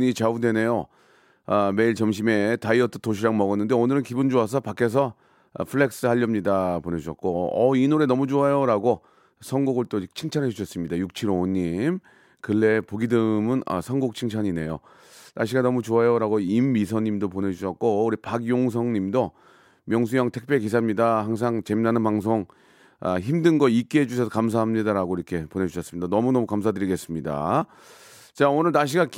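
Speech recording with nothing technically wrong to point to, so there are no times or causes to give.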